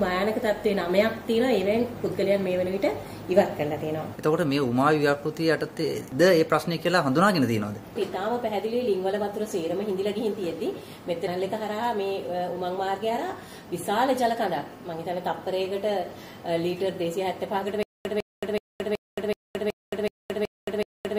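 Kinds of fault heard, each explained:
Stutter with silent gaps: from 17.83 s to the end, a 152 ms burst repeats nine times, each followed by 222 ms of digital silence, a steady 375 ms cycle. The likely cause is a stalled stream replaying its last fragment. The waveform shows identical blocks separated by flat silent gaps.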